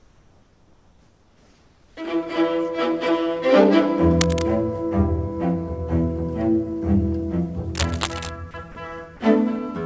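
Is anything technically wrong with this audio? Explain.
Yes. Comfort noise in place of the background, from 0.00 to 1.97 s: the sender likely stopped transmitting, so the receiver synthesised steady, featureless noise about 4 dB quieter than the real background.

Cable scratch noise, from 4.21 to 4.47 s and from 7.75 to 8.30 s: dense, uneven rustling nearly as loud as the sound itself, likely a worn cable or connector being moved.

Sound dropped by the voice detector at 8.51 to 8.54 s, 8.72 to 8.75 s and 9.17 to 9.20 s: each brief 30 ms gap turns to plain noise, likely because the detector treated the sound as background.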